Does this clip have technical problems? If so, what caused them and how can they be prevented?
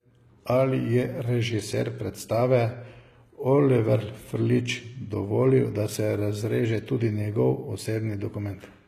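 Yes. The whole speech clip has gritty, metallic treble and lispy s sounds, likely from HE-AAC compression, which fits roughly 20 kbps. The highs are rebuilt from copied lower bands. Encoding at a higher bitrate, or with plain AAC, would prevent it.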